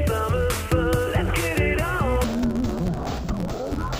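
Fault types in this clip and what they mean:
Interleaved audio read as planar: from 2.24 s, each 11.6 ms block's alternating left-right samples are split into halves played together, fitting a 512-sample buffer; the sound turns dull and robotic with an 86.1 Hz buzz, shown as evenly spaced spectrogram lines and waveform seams at block edges.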